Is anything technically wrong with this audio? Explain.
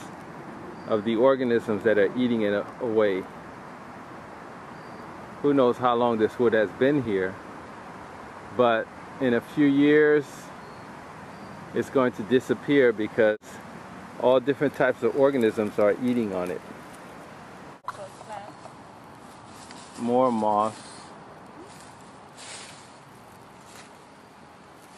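Yes. At 3.76 s there is damaged data in a compressed stream. The decoder loses sync on corrupt bytes and searches for the next frame header, producing a brief glitch.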